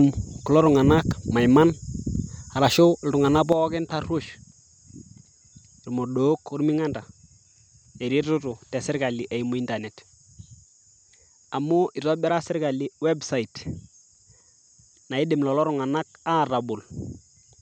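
At 3.52 s the speech suddenly turns duller and more boxed-in, drops noticeably in loudness by roughly 10 dB, and gains a faint new background noise well below the voice. There is no gap at the change, and the thinner sound persists to the end. Nothing above 8.5 kHz survives after that point. The likely cause is that the input switched to a poorer device mid-recording, one with narrower bandwidth, lower gain and its own noise floor.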